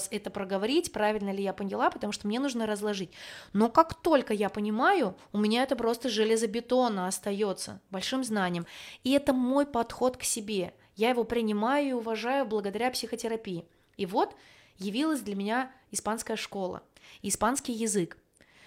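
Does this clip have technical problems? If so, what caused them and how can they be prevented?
No, there are no technical faults to report in this speech recording, so nothing needs preventing.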